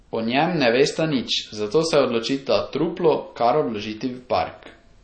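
From start to finish the speech carries audible damage of the kind MP3 compression leaves, likely from an encoder starved of bits, which fits a low bitrate near 32 kbps. Everything above 8.4 kHz is gone, so sibilants sound dull and clipped, while weak frequency components drop in and out between frames, giving a watery, swirling texture and smeared onsets. A spectrogram would show a flat ceiling at 8.4 kHz over the whole clip, with speckled, flickering gaps below it.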